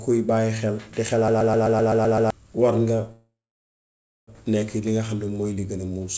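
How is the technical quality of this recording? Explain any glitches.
Two clear glitches in this speech recording, both in the first three-quarters. It also went over a call link: nothing reaches above 8 kHz, which fits a G.722 wideband codec at 64 kbps.

From 1.28 to 2.30 s, right after "xel di", there's a system hang loop. The machine froze while the audio hardware kept replaying its ring buffer. A 128 ms slice repeats eight times at about 7.8 Hz, a machine-gun stutter that fits a 2048-sample buffer. About a second of real audio is lost.

From 3.12 to 4.30 s there's a call audio freeze, likely from packets stalling until the jitter buffer ran dry. The last sound smears into a fading buzz or hiss, then about 0.93 s of silence. Speech resumes right where it stopped, nothing missing, just shifted about 1.16 s later.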